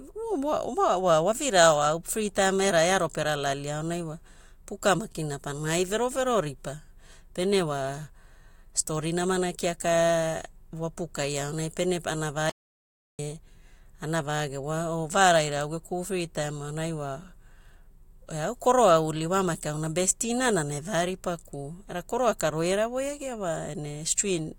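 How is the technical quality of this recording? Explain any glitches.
The recording has one clear glitch. At 12.50 s, right after "wapukai aonai pene ana", an audio dropout to silence lasts 0.69 s until 13.19 s. The input was likely lost, so silence was written. The speech cuts off abruptly with no room tone, which shows as a flat waveform line and a blank spectrogram column.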